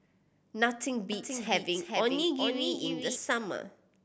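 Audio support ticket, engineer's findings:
Doubled audio track, 1.12 to 3.16 s: speech repeated about 0.4 s late, roughly 5 dB down, abrupt on/off. Waveform shows a shifted duplicate envelope; spectrogram shows full-band repeated harmonics without decay. Likely second capture path or misaligned edit.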